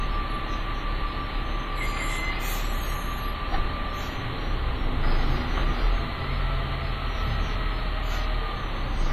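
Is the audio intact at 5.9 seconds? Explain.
No, at 5.9 seconds you're hearing the same WMA compression damage that runs through the whole clip. Likely a heavy low-bitrate encode, around 24 kbps, so the sound rings and smears with a washy, breathing hiss, and everything above 15.2 kHz is simply gone.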